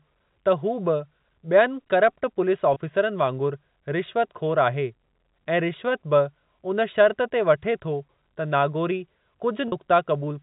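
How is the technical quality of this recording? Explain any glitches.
The recording has two kinds of fault: a constant comb-filter coloration and two brief dropouts. The audio passes through G.711 telephone coding, which caps the band at 4 kHz.

Channel delay (comb filtering), throughout: one channel lags the other by a tiny fraction of a millisecond, which fits a delay of a few samples. Summed to mono, the two cancel in evenly spaced notches, the first around 7 kHz, giving a slightly hollow, phasey tone.

Packet loss with pitch repetition, at 2.74 s: about 20 ms went missing, which fits a single lost packet. The receiver repeated the last pitch cycle to fill the gap, so the sound briefly holds with a buzzy quality.

Packet loss with pitch repetition, at 9.68 s: a longer 40 ms gap, consistent with two lost packets, was bridged the same way. The repeated cycle fades before the sound cross-fades back in.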